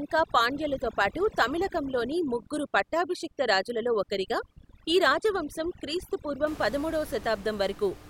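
From the start to 6.47 s the speech sits over twinkling near-silence: overdone noise removal, gating bands near the room noise, which sits about 16 dB down.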